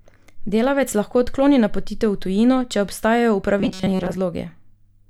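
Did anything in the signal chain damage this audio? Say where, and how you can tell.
Yes. Right after "v tujino če obstajajo", from 3.59 to 4.17 s, the speech collapses into a robotic sound from repeated short buffers: a rigid metallic buzz fixed at 188 Hz that loosely tracks the syllables. The likely cause is at the driver or buffer stage, where starved input is filled by looping a fragment of about 5.3 ms for most of that stretch. On a spectrogram this appears as flat, evenly spaced harmonics at multiples of 188 Hz; the waveform shows identical cycles repeating.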